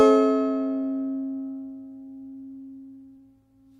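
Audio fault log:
2.33–3.22 s, repeated stalls (stutter): eight brief holds, longest 15 ms, stretch the sound by 85 ms as late packets starve playback; nothing drops out, unlike packet loss.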